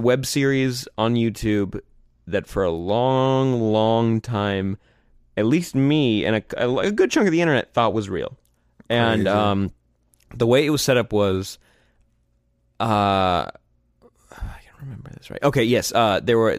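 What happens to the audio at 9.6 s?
Nothing goes wrong at 9.6 s; the speech carries on intact through that moment, with no dropout, click, distortion or other fault.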